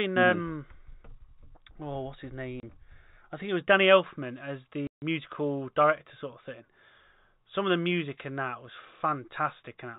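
Speech over a telephone-band G.711 path, broken twice by packet loss filled with silence: a 30 ms hole at 2.60 s right after "oh what's his", and a 150 ms gap at 4.87 s, both consistent with 10 ms packets. Each shows as a flat, empty waveform stretch and a blank vertical band on the spectrogram, with hard edges.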